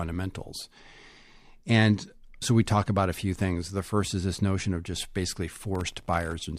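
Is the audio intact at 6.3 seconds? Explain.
No, 6.3 s sits right at the tail of a processor overload crackle running from about 5.75 to 6.33 s, just after "notion of just basically". The processor kept missing deadlines on tiny, sub-millisecond buffers, a few dozen times, each dropping a hard-edged gap of silence, so you hear gritty crackle riding on the speech.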